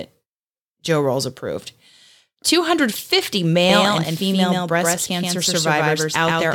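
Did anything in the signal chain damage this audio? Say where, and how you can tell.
Yes. From 3.69 s to the end, a doubled audio track appears: a full-band copy about as loud as the original trails it by roughly 150 ms, abruptly and without room decay. On a spectrogram every onset shows a twin shifted right. This is likely a second, slower capture path or a misaligned edit.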